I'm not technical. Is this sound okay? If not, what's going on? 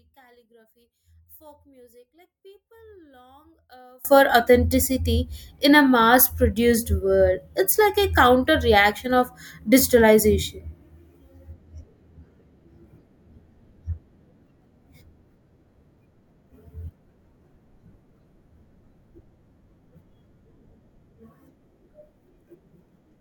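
No. For roughly the first 4 seconds, from the start to about 4.05 s, the speech almost disappears: what's left is faint, before the sound comes back to normal. The likely cause is one channel inverted. One of the two stereo sides is flipped upside down, so when both sides are combined into one, the parts they share, like a centred voice, cancel each other out instead of adding up.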